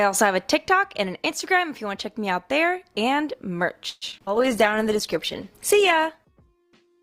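The audio has a call audio freeze from 3.89 to 4.04 s. The sound stops moving forward and the last moment is stretched into a fading buzz, with about 20 ms of near silence, before the audio resumes exactly where it left off. The cause is likely late-arriving packets that let the receiver's jitter buffer run dry, so it invented about 120 ms of filler. Nothing is skipped, but a gap is added, and everything after it plays that much later. Short concealed packet loss follows twice, at 4.12 to 4.14 s and again at 4.26 to 4.29 s. Each time about 20 ms of the stream failed to reach the decoder in time. The receiver covered the hole by extending the preceding sound and then blending back into real audio, so each spot comes across as a brief smear or wobble, and some sound may have vanished. The second repair also pulls playback delay back slightly. A call bitrate drop begins at 4.35 s and lasts to the end. 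The encoder was told to fall from 48 to 16 kbps after the bandwidth estimate collapsed. At that rate the coding turns coarse and the top end is cut back, so the sound becomes rougher, more watery and duller for the remaining 2.7 s without recovering. Overlapping it, a jitter buffer slow-down runs from 4.37 to 4.87 s. The receiver rebuilds its reserve by repeating single pitch periods and pause fragments, adding 39 ms. Playback runs at about 93% speed with unchanged pitch, so sounds seem drawn out and can carry a faint warble.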